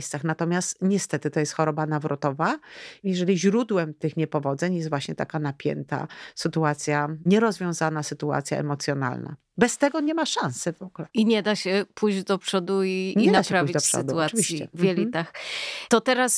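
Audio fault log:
Nothing to log here, since no technical faults turn up anywhere in this speech recording.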